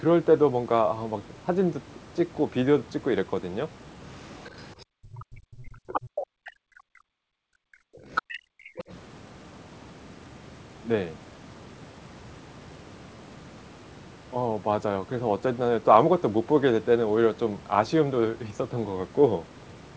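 Other side's voice leaking through begins at 4.11 s and runs to 5.23 s. A second voice sits faintly underneath, roughly 25 dB below the main talker. Its likely cause is a loudspeaker on the talker's device playing the far end, with the echo canceller failing to strip all of it from the microphone.

Background gated by the echo canceller appears inside that stretch, from 4.85 to 4.96 s. The room sound drops by about 40 dB for a tenth of a second. The canceller clamped the microphone hard while the loudspeaker was active, then released it.

Speech suppressed in double talk follows from 5.24 to 7.5 s, with about two seconds affected in total. The main voice dips and breaks up, at its deepest roughly 40 dB down. Both sides were likely talking at once, and the canceller, unable to separate its own talker from the echo, turned everything down.

Other side's voice leaking through returns briefly at 5.93 to 6.01 s, this time nearly as loud as the talker, only about 5 dB below. 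It is heard as a short, distinct scrap of the second voice.

Background gated by the echo canceller occurs again at 7.78 to 8.05 s, cutting the room sound by about 40 dB for roughly 0.3 s before it comes back.

Other side's voice leaking through comes back strongly at 8.15 to 8.94 s, again only about 5 dB under the talker. Background gated by the echo canceller overlaps it from 8.4 to 8.6 s, a drop of about 40 dB lasting roughly 0.2 s.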